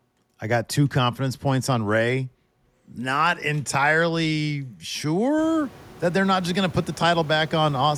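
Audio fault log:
No technical fault can be heard in this speech recording. The room's background noise rises by about 23 dB at around five and a half seconds and then sits about 24 dB below the speech, which is the room itself rather than the system.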